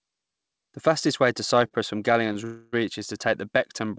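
At 1.68–1.73 s and 2.33–2.37 s, short stalls from a late packet briefly hold the sound too long, with a slight buzz or dip. Nothing is lost, and each hold is far shorter than a freeze. From 2.45 to 2.75 s, a call audio freeze stretches the last sound into a fading buzz or hiss for about 0.3 s without reaching silence, likely because packets were held up and the jitter buffer ran dry. It then resumes in place.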